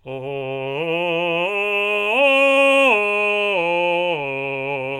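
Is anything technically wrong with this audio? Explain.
No, nothing in this music clip points to a technical fault in the recording or playback chain.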